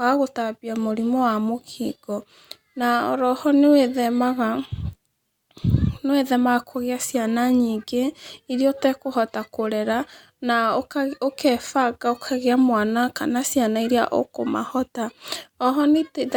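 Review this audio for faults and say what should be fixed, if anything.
Nothing in this speech recording needs fixing. No faults can be heard at any point, so there is nothing to prevent.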